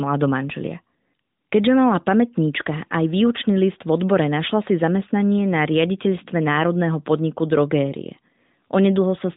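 Nothing stood out as a technical fault on listening to this speech clip.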